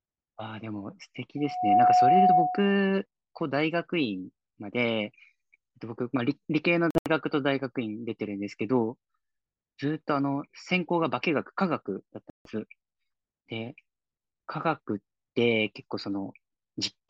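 From 1.37 to 2.82 s a loudspeaker feedback squeal takes over: a steady 730 Hz tone swells within roughly 0.4 s to around 10 dB above the speech. Unlike a hum or whistle already present in the recording, it grows from nothing, because the microphone keeps re-amplifying its own loudspeaker output at that frequency.

Between 6.91 and 7.07 s the audio breaks into cut-outs, about 122 ms missing in total, scattered over 152 ms, with the longest gap 76 ms. A second loss of 152 ms follows at 12.30 to 12.51 s. The likely cause is a Bluetooth dropout, with packets arriving too late and being discarded. The speech resumes further along rather than where it stopped, which sets these apart from a pause or a stall that merely delays playback.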